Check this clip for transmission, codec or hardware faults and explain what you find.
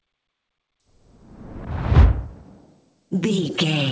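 No transmission, codec or hardware faults can be heard in this audio. It has passed through a call path, and the lack of any content above 8 kHz fits a wideband call codec such as G.722.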